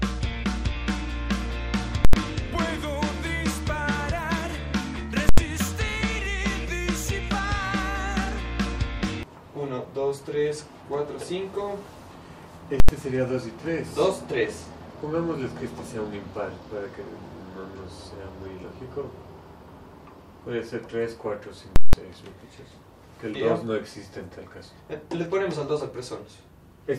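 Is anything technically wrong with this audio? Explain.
Yes. There are four bursts of invalid numbers at full scale, at 2.05 s, 5.29 s, 12.80 s and 21.76 s. A calculation produced infinite or invalid values that were forced to the extreme sample value. The output is pinned at one extreme value, far beyond the audio's peaks, for a whole block. The first three last about 85 ms each, which fits a 4096-sample block, and each lands as one violent bang. The last lasts about 171 ms, which fits an 8192-sample block. It gives a loud pop, a dead gap and a second pop.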